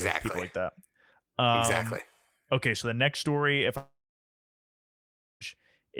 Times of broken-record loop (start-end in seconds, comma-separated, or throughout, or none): none